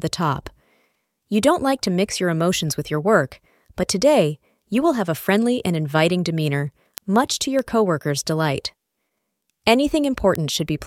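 From 0.23 s to 10.66 s, word clock ticks recur roughly every 0.3 s, around forty sharp clicks of uneven strength. The receiver runs unlocked, drifting by about 70 ppm, so single samples slip. A spectrogram shows evenly spaced thin vertical broadband lines; the waveform shows one-sample steps.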